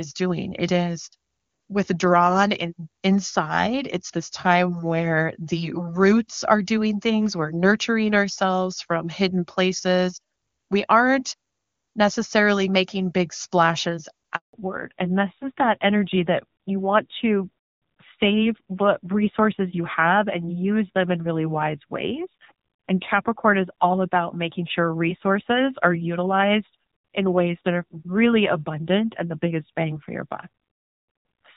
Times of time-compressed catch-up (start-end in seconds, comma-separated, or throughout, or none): none